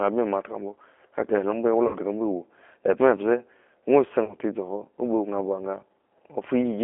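Speech running through the G.729 codec throughout, confined to roughly 250 Hz to 3.4 kHz and audibly rough and synthetic, which fits a low-rate 8 kbit/s voice link rather than simple filtering. VoIP packet loss concealed by the speech codec appears at 1.87–1.97 s, where about 60 ms, consistent with two lost packets, is stretched from the preceding sound and fades, and at 4.24–4.36 s, where about 30 ms, consistent with one packet, does the same. Unlike a clean dropout, the gap is filled rather than simply cut, and the sound stays weak for a moment after the gap.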